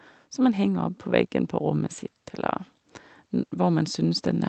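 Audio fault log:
0.36 to 1.05 s and 3.52 to 4.49 s, automatic gain rising: the automatic gain control judged the incoming level too low and gradually increased its gain. In the first stretch the level climbs by about 3 dB over roughly 0.7 s. In the second it is still rising when the clip ends. Because the gain acts on the whole signal, the speech and the background noise swell together, and the loudness creeps up rather than jumping.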